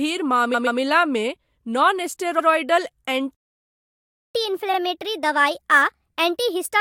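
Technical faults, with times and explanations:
0.53–0.79 s, 2.38–2.47 s and 4.73–4.77 s, repeated frames: a 128 ms block plays twice more, adding 256 ms, then an 85 ms and a 43 ms block each play once more. The decoder replays the same compressed stretch, so the audio stutters.
3.35–4.35 s, playback stall: the sound stops in mid-flow and stays silent for 1.0 s before resuming. The likely cause is that the player ran out of buffered data or its output thread was blocked, leaving nothing to send to the output.
4.35–6.81 s, catch-up at higher speed: after the stall the backlog is played 1.25 times too fast by resampling, so tempo and pitch rise together, the pitch by about four semitones. The effect lasts to the end of the clip as the player recovers lost time.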